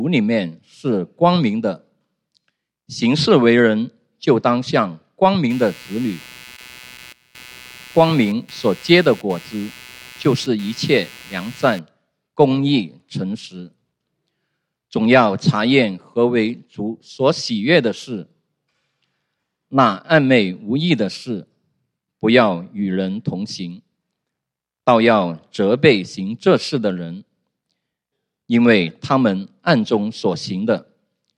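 A buzzing, chirping texture appears at 5.50 s and runs until 11.79 s, pulsing at a rate of around 150 Hz and sitting roughly 25 dB below the wanted sound. It rises and falls independently of the audio itself. This is computer activity noise: shifting load in the processor, graphics hardware or mouse disturbs the ground shared with the audio circuit, so the machine's electrical activity leaks into the signal.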